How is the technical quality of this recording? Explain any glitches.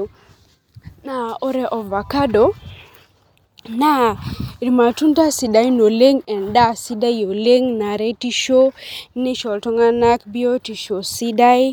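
The recording's signal holds steady, with nothing in it that a listener would hear as a glitch.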